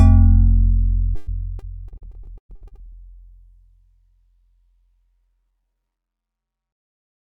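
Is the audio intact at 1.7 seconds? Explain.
No. At 1.7 seconds the audio sits inside a stretch of repeated packet loss (robotic sound) that runs from 1.15 to 2.93 s. Sixteen gaps fall in that span, the longest about 117 ms. Each hole is patched by stretching the last sound forward. About 477 ms is filled this way, roughly 29 percent of the span, while 520 ms is simply missing. The result is choppy sound with pieces dropped out.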